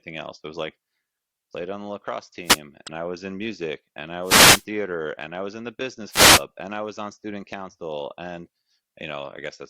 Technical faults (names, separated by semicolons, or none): wireless microphone noise hit; damaged data in a compressed stream